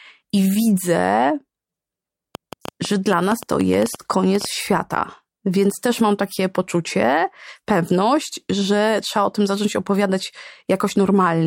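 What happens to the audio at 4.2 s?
At 4.2 s the speech sits inside a train of clicks running from 2.35 to 4.46 s. About fifteen same-shaped pops tick unevenly, 7.2 per second, up to 10 dB above the speech. Interference or a faulty connection or power supply is the likely cause.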